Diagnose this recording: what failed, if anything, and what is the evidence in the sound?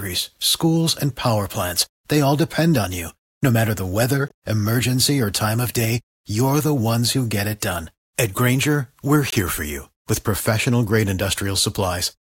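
The fault is a gap between chunks, introduced where the audio was split into blocks for storage or playback. Hard-edged 20 ms holes of silence fall at 4.28–4.30 s, between "matter the weather" and "emergency or time of", and at 9.30–9.32 s, just before "for you with professional". Their exact 5 s spacing points to fixed-length chunks joined with padding or a late start. Unlike packet-loss dropouts, nothing is missing: the sound simply pauses and resumes intact.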